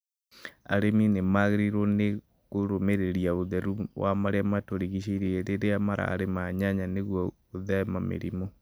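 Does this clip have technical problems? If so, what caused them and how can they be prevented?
Yes. From 4.56 to 6.22 s, between "kũrũmbũiya ũtheru wa marĩa" and "nyanya nĩguo", GSM signalling bursts produce a galloping dit-dit-dit of short 217 Hz buzzes roughly 30 dB below the speech, from a nearby 2G phone's radio bursts rectified in the audio circuit. Keeping phones away from microphones, cables and interfaces prevents this.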